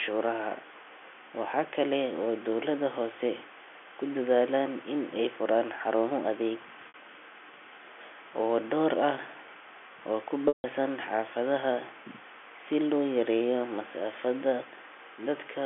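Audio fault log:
6.88–6.94 s and 10.48–10.64 s, packet loss with pitch repetition: after "ay furaan xarumo adeeg" about 60 ms of signal drops out, and after "oo ku" about 160 ms. The receiver fills each hole by replaying the last pitch cycle. The short gap comes across as a briefly held, buzzy tone. The long one outlasts the fade, so the repeated cycle dies into silence before the sound cross-fades back in, with the gap lengths fitting 20 ms telephone packets on this 300 Hz–3.4 kHz line.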